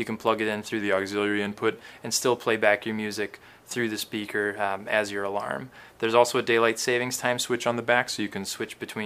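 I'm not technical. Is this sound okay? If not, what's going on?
No. There is a drift correction step at 0.81 to 1.76 s and again at 7.50 to 8.45 s. Each time, the sound slows by about 6% and drops in pitch by a little more than a semitone for roughly a second, then snaps back to normal. This is likely software that keeps two clocks in step, briefly slowing playback to refill its buffer and then returning to normal speed.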